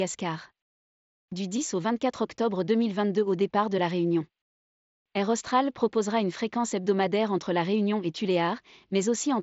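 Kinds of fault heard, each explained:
No faults are audible anywhere in this speech clip.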